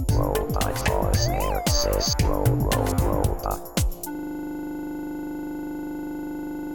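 System hang loop from 4.15 s to the end of the audio: a single 40 ms fragment repeats at 25 Hz, buzzing, because the frozen system keeps replaying one buffer.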